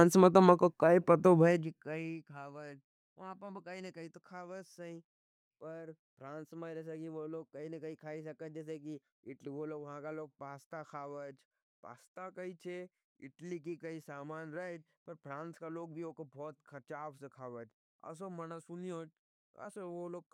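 From 1.36 to 2.22 s, right after "में तो क्या पता" and ending before "खवाच वहाँ पर कई", a fine ticking or zipping sound rides on the speech as its level drops by roughly 20 dB. This is zipper noise: the gain was lowered in discrete jumps, around a hundred per second, rather than as a smoothed ramp. Each jump leaves a tiny click in the waveform, and the rapid train of clicks forms the buzzy texture heard during the fade.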